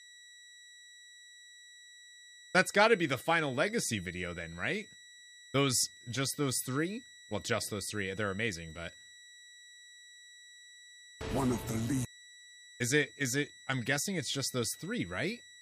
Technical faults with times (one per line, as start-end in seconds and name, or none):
0.00-15.61 switching supply whistle